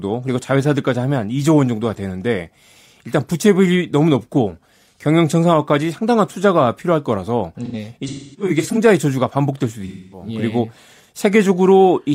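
A speech recording with AAC frame loss and concealment in two places. From 7.65 to 8.78 s, about 0.55 s of lost audio is scattered over 1.1 s, the longest run about 0.3 s. From 9.86 to 10.27 s, 0.26 s is lost. The decoder rebuilt the gaps from the last good spectrum, so the sound turns smeared and phasey and sags in level instead of snapping to silence with clicks as a plain dropout would.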